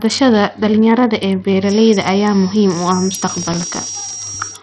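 Speech runs through the whole clip with a dulled, gritty top end that points most likely to heavy Bluetooth SBC compression at a low bitrate, around 64 kbps. Nothing is left above 14.6 kHz. From 1.59 s to the end, a thin feedback whistle at 5.7 kHz sits roughly 15 dB under the speech, swelling and fading slowly but never building. That steadiness separates it from runaway howl, and the likely cause is a loudspeaker-to-microphone loop held just short of instability. Between 3.38 and 4.27 s, processor overload crackle tears across the audio. Dozens of missed deadlines each replay a sliver of old audio with hard edges, which fits buffers under a millisecond long. Unlike clicks from a damaged recording, the crackle clusters densely and then stops once the load passes.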